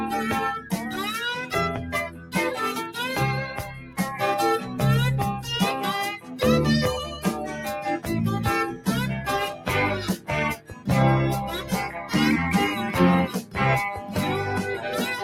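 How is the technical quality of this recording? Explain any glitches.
The recording is compromised by speech-style noise processing that treats sustained material as noise.

A noise suppressor applied to music or sounds runs throughout the clip. It mistakes steady tones, ambience and decays for background noise and attenuates them, so gain swings by around 10 dB. Attacks pass while sustained parts thin out and pump.

Sound cut by the noise suppressor occurs at 0.59–2.36 s, 3.59–4.79 s, 6.19–12.12 s and 13.28–14.16 s. Within each span, stretches totalling roughly half a second to one and a half seconds sink by about 11 to 12 dB, with tails cut short and held sound ducking audibly.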